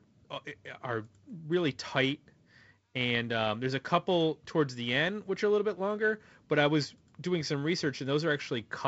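Nothing stood out on listening to this speech recording, which comes through G.722 wideband telephone coding at what sounds like 48 kbit/s, with nothing above about 7.7 kHz.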